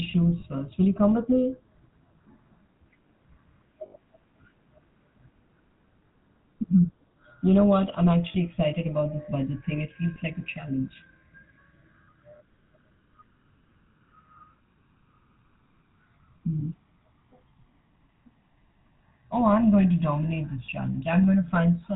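From start to finish the speech has a buzzy, gravelly roughness and a dull top end, with nothing above 4 kHz. This is the sound of the GSM full-rate codec at 13 kbps, whose damage is plainly audible here. It models the vocal tract and excites it with a sparse, regularly spaced pulse train that keeps only a third of the excitation samples. That coarse excitation produces the grainy buzz, and the codec's band limit removes all the high-frequency detail.

Short bursts of metallic, ringing hold interrupt the speech at 0.40–0.43, 3.86–3.96, 6.06–6.08, 8.32–8.35, 10.14–10.17, 16.60–16.63 and 20.66–20.69 s. Landmarks include the gap between "know what I'm" and "excited about this budget", the one just before "like a challenge", and the one right after "going to dominate this". These are lost GSM frames. The decoder repeats the last good frame's parameters, with the level falling from the second lost frame on. 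Most gaps last about 20 ms, which fits a single lost frame. The 80 ms gap at 3.86 s rings longest.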